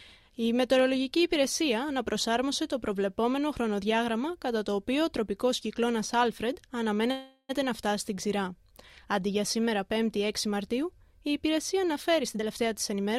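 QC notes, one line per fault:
7.11–7.51 s, call audio freeze: a fading buzz stretches the last sound, then silence; likely packets held up, jitter buffer ran empty, audio resumes intact.
12.23–13.14 s, jitter buffer speed-up: audio hurries at unchanged pitch, about 115% speed; short pitch-period pieces removed, roughly 150 ms, draining the buffer's excess delay.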